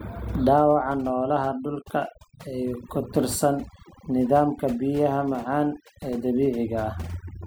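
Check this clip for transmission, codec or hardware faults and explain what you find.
The speech carries overdone noise removal, and it runs for the whole clip rather than coming and going. A noise reducer pushed too hard is clamping individual frequency bands down whenever they sit close to its idea of the noise floor, so the softer parts of the voice get pulled out along with the noise. You hear it as a nearly dead background with little twinkling specks.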